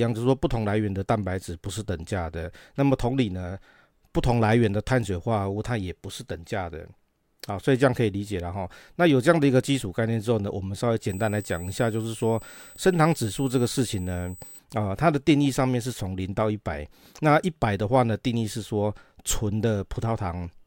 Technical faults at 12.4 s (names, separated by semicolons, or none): USB whine